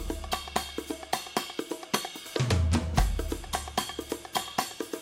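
No technical faults are audible.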